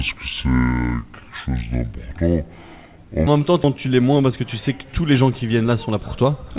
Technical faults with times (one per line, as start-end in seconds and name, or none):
0.00-3.27 section at the wrong speed
3.64-3.66 skip ahead
3.76-6.38 jitter buffer speed-up